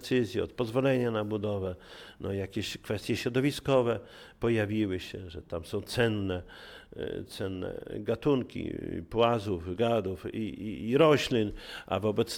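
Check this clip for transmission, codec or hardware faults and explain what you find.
Checking this clip turns up no faults to explain.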